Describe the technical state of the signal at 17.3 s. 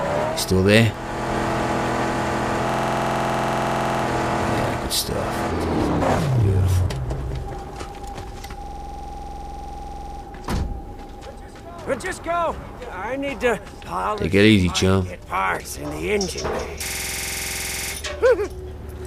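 System hang loop from 16.86 to 17.93 s: playback froze and one 46 ms slice, fitting a 2048-sample buffer, repeats 23 times at 21.5 Hz.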